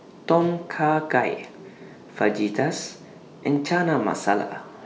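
At 3.56 to 3.58 s a single sharp loud pop cuts through the speech, peaking a few decibels above it while the speech carries on underneath. It is likely an electrical pulse, such as a plug, switch, static discharge or driver glitch, added to the signal.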